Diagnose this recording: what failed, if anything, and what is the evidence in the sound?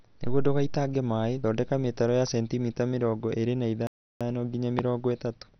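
Codec stage: dull, gurgling speech, likely MP2 compression starved of bits, consistent with about 48 kbps, shutting off upper sub-bands.

Playback stage: the speech drops to silence from 3.87 to 4.21 s, about 0.34 s, then resumes. This is likely a playback stall from the output buffer running dry.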